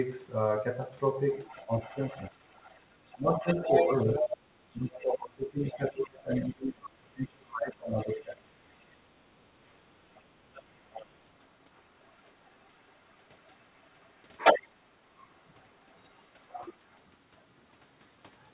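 Other side's voice leaking through, from 1.29 to 6.45 s: a second voice sits under the speech at a level not far below it, about 5 dB down. This is most likely loudspeaker playback reaching the microphone that the echo canceller failed to remove. The same leak returns faintly from 7.97 to 8.97 s, around 25 dB down, and again from 10.18 to 16.73 s at roughly 15 dB below the speech.

Speech suppressed in double talk, from 1.66 to 8.46 s: while the far side plays on the loudspeaker, the main speech repeatedly dips and drops out in pieces, for about 4 seconds in total, at worst falling by around 30 dB. The likely cause is the echo canceller treating the simultaneous talk as echo and pulling down everything, including the near-end speech.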